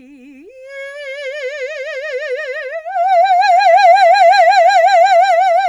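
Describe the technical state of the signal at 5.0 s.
At 5.0 s the music plays through intact, with no fault in the signal at that moment.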